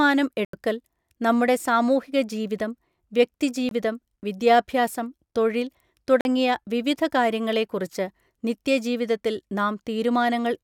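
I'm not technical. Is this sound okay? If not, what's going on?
No. There are three blocks of digital silence: at 0.45 to 0.53 s, at 3.69 to 3.71 s just after "നമ്മുടെ സാമൂഹിക ജീവിതം വ്യക്തി", and at 6.21 to 6.25 s just after "വിദ്യാഭ്യാസം തൊഴിൽ". In each, the speech abruptly drops to total silence and comes straight back. The gaps last about 85, 21 and 43 ms, which points to the playback or recording program failing to deliver audio in time.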